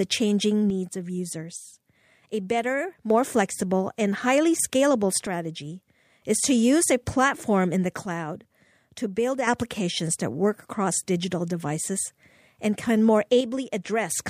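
One channel drops out at 0.70–3.10 s, ending just before "flexible and highly scalable," and again at 5.27–6.22 s, at 8.06–9.47 s right after "a platform in the," and at 13.41–14.10 s after "devices and can more." Each time the speech abruptly falls by about 6 dB and then jumps back. This is likely one stereo side going silent, so the mono sum loses half of what both sides carried.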